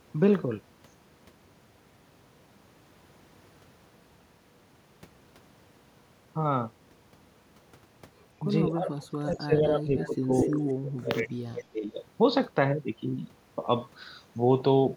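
From 8.71 to 10.31 s the echo canceller likely mistook simultaneous talk from both ends for echo and turned the speech down. This is speech suppressed in double talk, and the speech sinks by as much as roughly 30 dB. From 9.97 to 10.15 s an echo leak appears, likely because the far end's loudspeaker pickup was not fully cancelled. It returns a faint copy of the speech delayed by 247 ms, about 20 dB down. The same echo leak comes back louder from 10.33 to 10.73 s, only about 5 dB below the speech, again likely from incomplete cancellation. From 10.79 to 11.92 s the double-talk suppression likely strikes again, with the speech ducking by as much as roughly 30 dB.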